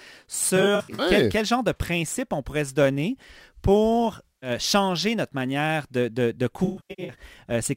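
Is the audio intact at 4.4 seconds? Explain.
No. At 4.4 s the sound falls inside an AAC frame loss with concealment running from 4.26 to 4.50 s. About 170 ms of coded audio is missing, which fits a run of several consecutive AAC frames. The decoder patches the gap by reusing the last good spectrum with altered phase and energy rather than true signal, so the passage is heard as a smeared, noisy, phasey stretch instead of clean speech.

Underneath that, sample clock jitter is present across the whole clip, including this moment. The converter clock wanders by a few microseconds, so each sample is taken slightly early or late. The error tracks how steeply the waveform is changing and sits at roughly 30 dB below the signal. It is heard as a hiss or roughness that rises on loud, bright parts of the speech and disappears in the pauses.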